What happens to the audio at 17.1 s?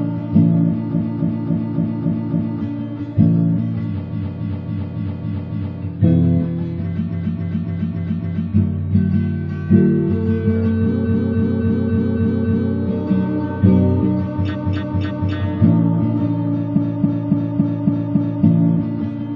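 At 17.1 s the audio is caught in repeated frames, running from 16.74 to 18.42 s. A block of compressed data about 278.6 ms long was delivered again and again, so the decoder replays the same slice six extra times. It is heard as a rhythmic stutter and adds 1.67 s to the sound. On a spectrogram or waveform, one identical 0.28 s pattern appears tiled side by side across that span.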